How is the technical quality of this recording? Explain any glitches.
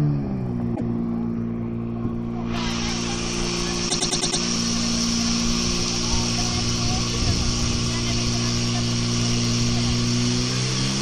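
The recording has two stutters caused by repeated frames. At 0.75 to 0.90 s a 157 ms block plays twice. At 3.88 to 4.40 s a 104 ms block loops five extra times, adding about 0.52 s. Compressed frames were duplicated before decoding. On a spectrogram and waveform, identical segments sit side by side.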